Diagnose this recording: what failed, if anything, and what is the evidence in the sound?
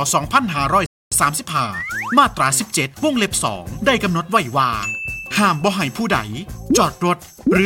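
Playback failed with a rebuffering stall from 0.86 to 1.12 s. The sound drops to silence, then resumes from exactly the point where it stopped, with nothing skipped. The player's downloaded audio ran out, and waiting for more added about 255 ms.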